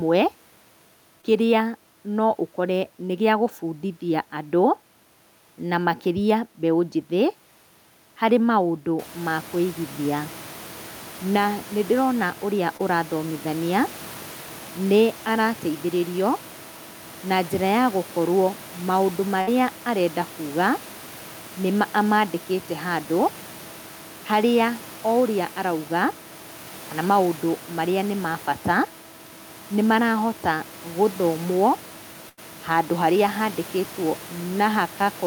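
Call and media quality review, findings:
Short concealed packet loss, 1.21–1.25 s before "kĩrĩa no" and 12.77–12.81 s. Brief smear in the speech. Jitter buffer and decoder concealment extended the last sound over about 15 ms and 22 ms. Roughly 20 ms of real audio is lost each time.

Burst of packet loss, 19.41–19.49 s after "njĩra ya gũkorwo maũndũ" and 32.29–32.39 s. Held buzz or hiss fading out, then speech resumes further on. Concealment ran about 59 ms and 84 ms, and about 60 ms and 80 ms of speech is missing. The room noise steps up by about 17 dB around 9 s and stays about 21 dB below the speech.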